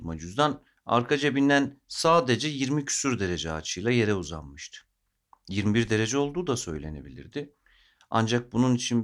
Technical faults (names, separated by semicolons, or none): none